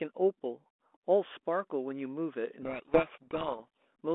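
Speech carried over a G.726 ADPCM telephone path, band-limited to roughly 250 Hz to 3.5 kHz with light coding noise consistent with the 32 kbit/s rate, suffers a codec payload misread from 2.62 to 3.88 s. The receiving side reads the G.726 code words with their bit order reversed, so every adaptive step is decoded from the wrong bits. Across that stretch the speech sinks under harsh, grinding distortion, then clears once the bit order matches again.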